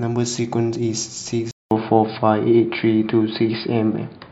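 A likely mid-recording input switch to a poorer device accounts for the change in this short speech clip. At 1.51 s the sound drops out for 200 ms, and from there to the end the band is cut off, with nothing above 4.9 kHz. The speech turns dull and boxy, the level shifts by around 5 dB, and a new background noise floor appears, sitting roughly 40 dB below the signal. That combination of narrower bandwidth, different level and different noise fits an input switched to a poorer device.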